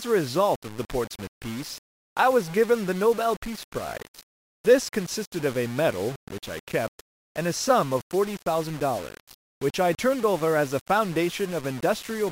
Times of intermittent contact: none

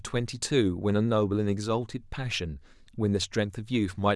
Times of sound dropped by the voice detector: none

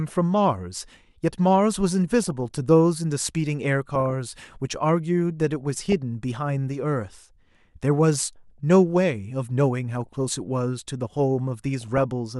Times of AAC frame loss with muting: none

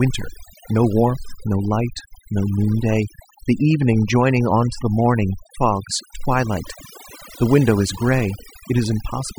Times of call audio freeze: none

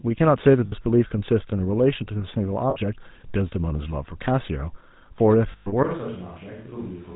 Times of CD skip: none

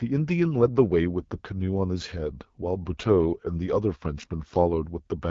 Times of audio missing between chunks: none

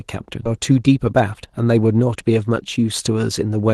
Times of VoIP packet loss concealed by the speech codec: none

